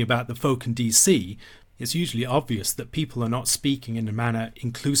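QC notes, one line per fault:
No faults found in the speech recording. Nothing here needs a QC flag.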